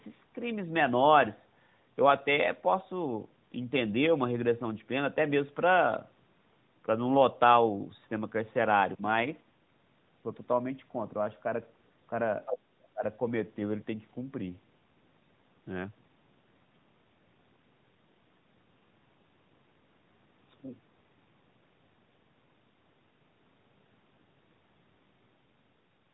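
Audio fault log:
12.46–12.58 s, other side's voice leaking through: a faint second voice, roughly 10 dB below the main talker, surfaces for a brief scrap. This is likely loudspeaker playback of the far end reaching the microphone and slipping past the echo canceller, heard within the narrowband AMR-NB telephone band.
12.57–12.61 s and 12.93–13.03 s, speech suppressed in double talk: the talker's level dips sharply, by around 20 dB in the first short gap and nearer 25 dB in the second, longer one. Both sides were likely talking at once, and the echo canceller could not separate its own talker from the echo, so it turned everything down.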